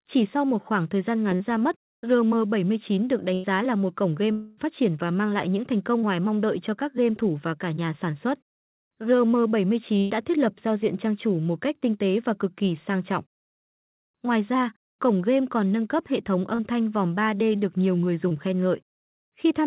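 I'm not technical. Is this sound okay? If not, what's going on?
No. The audio came through a phone-style call connection, which keeps nothing above 4 kHz and gives it a narrow telephone tone. Along the way, pieces of the audio went missing in transit.

Short concealed packet loss happens four times: 1.36 to 1.42 s, 6.01 to 6.04 s, 16.55 to 16.61 s and 18.29 to 18.32 s. Each time, a sliver of the speech (20 to 40 ms) never arrived in time. The receiving end patched the hole by stretching out the sound just before it, then blended back in. You hear a quick smear or wobble, and a very short sound may simply disappear.

A burst of packet loss happens twice, at 3.34 to 3.46 s and 9.98 to 10.23 s. Here several chunks in a row were lost, about a tenth of a second each time. The receiver kept repeating the last sound and let it fade, so you hear a brief held buzz or fading hiss. The speech then picks up a little further on, with the piece in between gone.

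From 4.32 to 4.59 s there is a longer gap of about a quarter of a second. It is filled by a stretched, fading continuation of the previous sound, with no true silence. Then the speech returns, skipping what was lost. This is likely a long network dropout, where the connection briefly delivered nothing and the receiver covered the gap as best it could.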